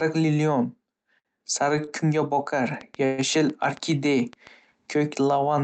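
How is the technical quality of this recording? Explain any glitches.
The recording has several timing glitches and a burst of clicking. It is band-limited to about 8 kHz, consistent with a call codec such as Opus.

Short stall from a late packet, at 1.19 to 1.27 s and 1.85 to 1.89 s. A packet arrived late, the jitter buffer emptied, and the receiver stretched the last sound by 53 ms and then 20 ms. Nothing is lost, but the sound drags briefly.

Train of clicks, from 2.81 to 4.48 s. Regular ticks repeat at about 7 per second, roughly ten in all, each poking a few dB above the speech. The likely cause is interference or a faulty connection injecting pulses.

Call audio freeze, from 3.05 to 3.20 s. The packets were likely held up in transit. The receiver filled 128 ms with a fading buzz of the last sound, then resumed where it stopped, inserting a gap without dropping any audio.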